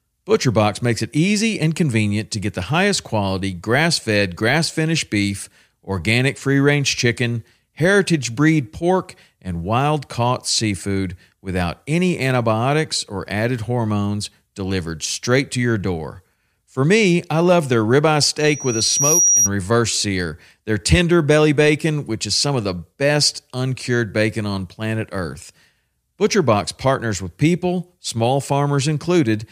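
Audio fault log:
18.40–19.49 s loudspeaker feedback squeal: the microphone picked up its own loudspeaker, and loop gain exceeded unity at 5.8 kHz. That tone fed on itself, swelling over roughly three quarters of a second into a piercing squeal a few decibels above the speech.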